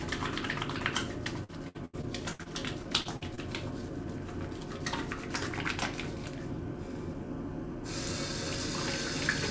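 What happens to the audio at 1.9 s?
At 1.9 s the sound is mid-way through repeated packet loss (robotic sound), 1.44–2.47 s. Six gaps, up to 80 ms, are each patched by extending the last sound, giving choppy repetition rather than one clean dropout.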